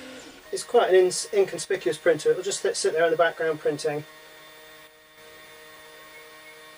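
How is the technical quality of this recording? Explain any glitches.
The recording has two kinds of glitch, each occurring twice: brief level drops and isolated clicks.

From 1.65 to 1.75 s and again from 4.87 to 5.18 s, the level sags by about 6 dB and then recovers. This is one channel dropping out, most likely because one side of the stereo feed was briefly lost before the mono fold-down. What both channels shared halves in amplitude, and anything unique to the missing side vanishes. Unlike a fade or a gain ride, the drop is abrupt at both edges.

At 1.90 s and 5.77 s there is a single sharp click, heard as a thin vertical line across the spectrum. These are dropped samples, likely a fraction of a millisecond lost from the stream, so the waveform jumps straight to a later value. The gap is far too short to remove any audible sound, which separates it from a dropout. It also lacks the level change of the channel loss.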